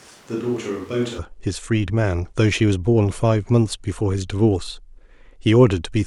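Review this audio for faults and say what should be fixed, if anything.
From the start to 1.17 s, the speech sounds roomy, hollow and thin in the bass, about 5 dB quieter, with room noise only about 25 dB below it. It then snaps back to close sound, likely a switch to a distant microphone rather than added reverb or a level dip. To prevent it, monitor and back up the close microphone so the distant one is never used as the main source.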